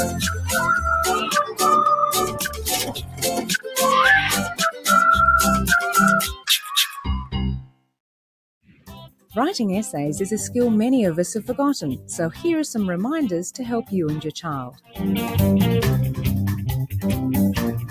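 A noise suppressor made for speech stays on across the whole clip, treating steady sound as noise and swinging its level down by around 10 dB. On a waveform the envelope pumps, and a spectrogram shows sustained energy thinning and tails ending early. Sound is cut by the noise suppressor at 0.05–1.61, 2.26–3.78, 4.41–4.88, 6.31–6.71, 6.87–7.03, 7.61–7.92, 8.63–9.36 and 14.7–14.99 s, with held sound sinking by about 7 to 19 dB. These show as dark gaps in the spectrogram and as notches in the waveform.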